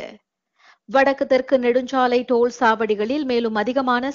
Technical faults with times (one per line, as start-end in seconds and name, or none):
none